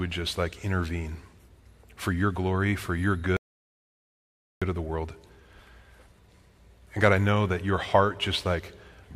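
An audio dropout to silence runs from 3.37 s to 4.62 s, removing about 1.25 s of the speech. The talking stops abruptly mid-flow and resumes just as suddenly, and in between there is dead digital silence with no room tone or hiss at all. That total blankness points to the input being cut off, likely through a disconnected device, a failed link or a stray mute, while recording carried on writing silence.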